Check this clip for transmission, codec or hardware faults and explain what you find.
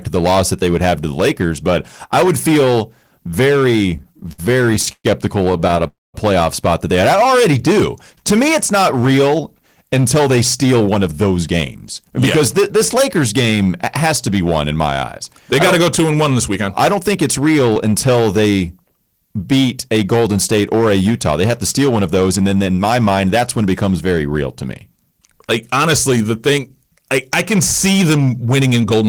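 The speech shows several faults: hard clipping across the whole recording, plus a cluster of jitter-buffer events in the first nine seconds and four speed-up passages later on.

Hard clipping runs from start to finish. The signal is driven about 12 dB beyond what the chain can pass, so roughly a tenth of the samples hit the ceiling and are cut flat. Those squared-off peaks generate high-order harmonics, and at this level of overload every loud syllable carries a harsh, fuzzy edge rather than occasional crackle.

Repeated stalls (stutter) occur between 3.97 and 5.81 s. Packets arrived late or too slowly, so the jitter buffer drained 21 times in under two seconds. Each time, the receiver extended the last sound until data resumed, filling 377 ms in total, about 21% of that span, with the longest wait 119 ms. Nothing is lost, but the speech drags and catches in a choppy, hesitant rhythm.

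A call audio freeze follows at 5.87 to 6.16 s. The sound halts, and the held audio decays to near-silence for about 200 ms of the 266 ms pause before continuing where it left off, with nothing skipped. The likely cause is packets held up in transit, emptying the buffer and forcing the receiver to conceal and wait. The playout delay is 266 ms longer afterwards.

A jitter buffer slow-down runs from 7.16 to 8.22 s. To rebuild its reserve, the receiver repeated single pitch periods and fragments of pauses, adding 76 ms and playing at 93% speed. Pitch is unchanged, but the speech is audibly stretched, with drawn-out vowels.

Jitter buffer speed-up appears four times: 10.19–14.07 s at 105% with about 200 ms removed, 16.96–18.17 s at 108% with about 100 ms removed, 25.77–26.85 s at 106% with about 70 ms removed, and 28.61–28.95 s at 110% with about 40 ms removed. In each case the buffer held excess audio, so the receiver cut short pitch-period pieces to reduce delay. 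Pitch stays put while delivery sounds hurried.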